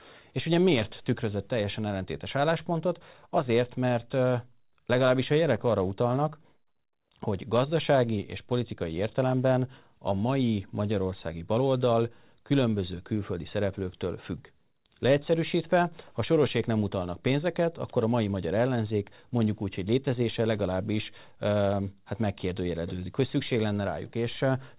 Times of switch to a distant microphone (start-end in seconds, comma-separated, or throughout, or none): none